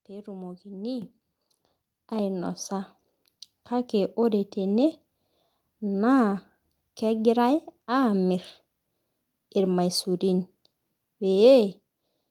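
Microphone volume stepped up at 1.02 s and again at 4.05 s, just before "ore tene". The call software judged the microphone too quiet and raised the device's input volume in a single jump rather than a gradual ramp. At 1.02 s the speech and background rise together by about 9 dB, an abrupt lift in loudness. At 4.05 s the step is about 1 dB, a barely noticeable nudge.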